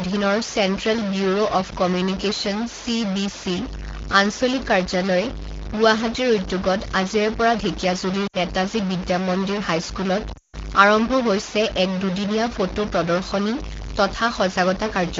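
Speech carried over an AMR wideband (HD Voice) link, with a distortion running through the whole recording and two concealment events. The constant grit, which also puts a hiss-like noise floor into the pauses, is most likely a stuck bit: one data bit pinned high or low, so roughly half the sample values are offset by that bit's weight, tracking the waveform and flipping with the sign of quiet signals. The two dropouts are lost AMR speech frames. At 8.27 to 8.37 s about 60 ms goes missing, which fits three 20 ms frames; the decoder repeats the last good pitch and spectral envelope at reduced gain, giving a brief smeared dip. At 10.34 to 10.56 s the losses are scattered across about 200 ms, totalling 180 ms with a longest run of 160 ms, long enough for the sound to drop to near silence before the speech returns weak or rough. The wideband codec's light coding texture sits underneath both faults.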